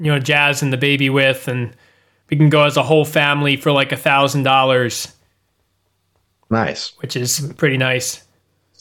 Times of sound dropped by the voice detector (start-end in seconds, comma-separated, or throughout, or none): none